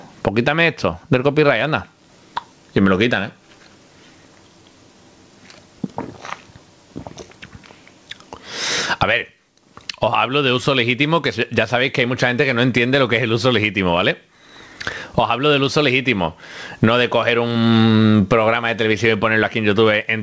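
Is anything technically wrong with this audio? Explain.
Yes. Gain pumping runs through the whole clip, with a level swing of around 30 dB. The likely cause is an input gain set far too high, with a fast limiter or compressor clamping down on every peak, so loud and soft passages end up squashed together. A noise gate would instead cut the gaps to silence, and a slow gain control would drift rather than duck instantly. The sound passed through a call connection, and its band ends at 8 kHz, which fits G.722 coding.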